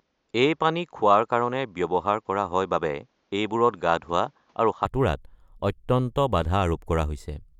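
From the start until 4.85 s, the input was likely switched to a poorer device, a second microphone or headset path whose narrower band cuts everything above 7.3 kHz. The speech sounds dull and boxy, with a faint added noise floor roughly 45 dB below the voice. At 4.85 s the fuller sound returns abruptly, with no gap and no noticeable jump in loudness, so the change is heard as the tone brightening and the added noise dropping away.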